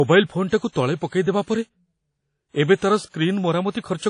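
Throughout the speech there is a ringing, washy quality, with a hiss that swells and fades along with the voice, and nothing comes through above about 10.1 kHz. This is likely WMA compression at a low rate, with damage that fits something like 32 kbps. The transform encoder smears quantisation noise over tens of milliseconds around each sound and discards weaker spectral detail, leaving the top band empty.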